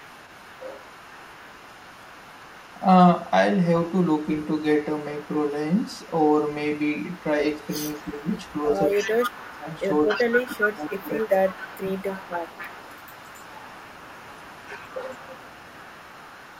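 From 0.0 to 2.85 s a faint delayed copy of the speech trails the talker by 270 ms, well below the direct speech. It returns briefly at 3.18 to 3.31 s, quieter still, then runs from 3.83 to 9.31 s. This is echo leak: a loudspeaker on the far end likely fed the microphone, and its echo canceller let part of that pickup through and sent it back.

Overlapping this, speech suppressed in double talk appears at 8.05 to 8.16 s as a short, shallow dip. At 9.09 to 9.67 s it becomes a deep cut of roughly 15 dB that takes out about half a second of the talker. While both sides were active, the echo canceller likely could not tell the local talker from the loudspeaker echo and pulled both down.

The echo leak resumes at 9.74 s and continues to the end, now somewhat louder relative to the speech, still at 270 ms delay. Inside it, from 10.22 to 11.87 s, the double-talk suppression strikes again. The talker's level drops by up to roughly 15 dB in pieces, for about a second in total.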